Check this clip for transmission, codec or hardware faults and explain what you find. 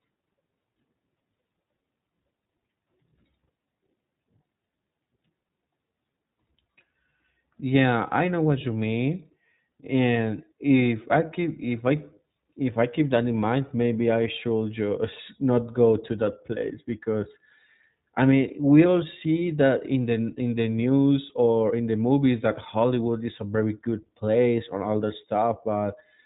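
The clip carries one fault, present from start to finish: iLBC codec coding. Nothing above 4 kHz survives, and the speech sounds slightly rough and synthetic. Each 20 ms frame's excitation is coded independently of the previous one, and the plainly audible roughness fits the 15.2 kbps mode.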